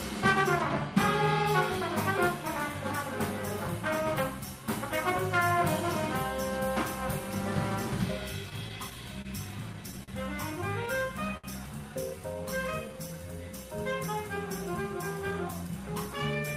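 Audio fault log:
8.49 to 10.10 s, repeated stalls (stutter): the jitter buffer ran dry seven times as packets arrived late or too slowly, and each time the receiver held the last sound going until data caught up. Together about 130 ms was filled this way, with the longest single wait 44 ms, roughly 8 percent of the span. Nothing is lost, but the audio hitches and drags through this stretch.
11.37 s, short stall from a late packet: one packet missed its playout time, leaving the buffer empty, so the receiver stretched the preceding sound for 64 ms until it arrived and then resumed exactly where it left off. The playout delay grew by that same 64 ms. No audio is missing; a single sound is simply held too long, with a faint buzz or dip where the stretch sits.
12.20 to 13.28 s, jitter buffer slow-down: with its reserve running low or its target delay just raised, the receiver deliberately repeated individual pitch periods and fragments of pauses many times over to rebuild a cushion, adding 78 ms across the span. 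Playback runs at about 94 percent speed while pitch stays unchanged, so sounds come out drawn out and slightly lengthened, sometimes with a mild warble from the repeated cycles.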